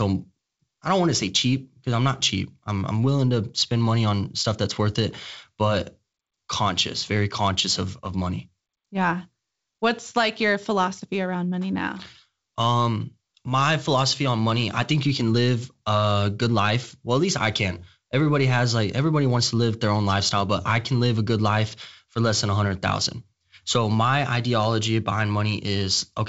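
No technical faults occur in this speech, which comes through the G.722 wideband telephone path at 64 kbit/s with nothing above about 7.7 kHz.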